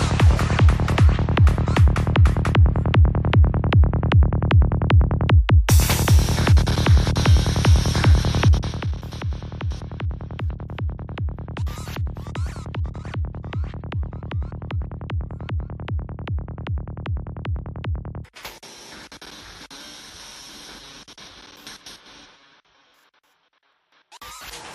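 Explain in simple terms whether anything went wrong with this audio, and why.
Between 8.47 and 8.92 seconds, a rapid ticking or zipping rides on the sound while it gets quieter. This is zipper noise. The volume was turned down in small jumps, around fifty per second, instead of in one smooth glide. Each jump makes a tiny click, and that quick string of clicks blurs into the buzzy zipper texture you hear until the level settles lower.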